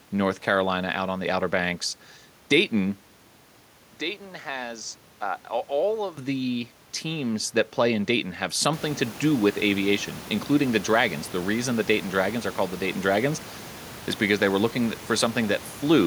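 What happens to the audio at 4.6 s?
The recording likely switched its input to a poorer device from 3.21 to 6.17 s, so the sound turns dull and about 10 dB quieter, just before "the teams that play".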